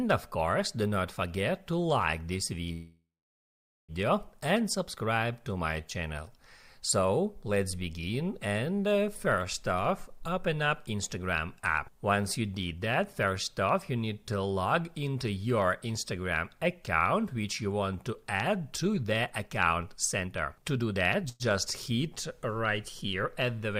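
From 2.73 to 3.92 s the sound stretches into a fading buzz and then about 0.83 s of silence before resuming exactly where it stopped. This is a call audio freeze, likely from delayed packets that let the jitter buffer run dry, inserting a 1.16 s gap without losing anything.

At 10.61 to 11.08 s and 12.60 to 13.27 s the audio runs about 9% fast at unchanged pitch, with roughly 50 ms and 70 ms trimmed. This is jitter buffer speed-up: the receiver cuts pitch-period-sized slices to shed excess buffered delay. A stronger run from 18.72 to 21.26 s at 116% speed removes about 0.4 s and sounds noticeably hurried.

Right after, from 21.29 to 21.43 s, a brief 108 ms call audio freeze adds a short buzzing extension with no silence, likely another momentary buffer underrun.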